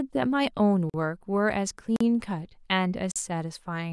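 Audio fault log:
0.90–0.94 s, 1.96–2.01 s and 3.12–3.16 s: block of digital silence. Each time, the output buffer likely went out empty, with zeros in place of the speech, for about 43 ms. That length fits an unfilled 1024-sample buffer. The audio drops straight to zero and then straight back with no fade, so each gap is heard as a short, sharp hole in the speech.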